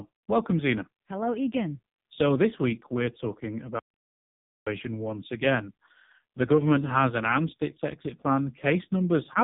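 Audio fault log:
throughout, AMR narrowband mobile codec: heavily buzzy, synthetic speech with nothing above 3.8 kHz, from a sparse pulse-driven vocal-tract model at a very low bitrate, around 5 kbps.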